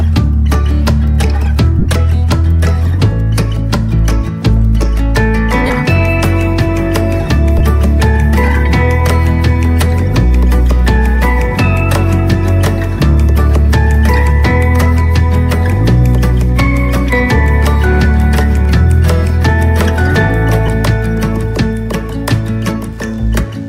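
At 1.79 to 1.86 s, lost LE Audio frames total about 60 ms, scattered over 75 ms with the longest gap around 30 ms. Shorter losses follow at 5.67 to 5.70 s (30 ms), 7.59 s (15 ms) and 20.67 to 20.69 s (15 ms). In each gap the LC3 decoder replays the last spectrum with scrambled phase, which fits 7.5 ms frames. A hard dropout would go silent or click. Here the sound briefly turns into a noisy, hissy smear that is still sounding.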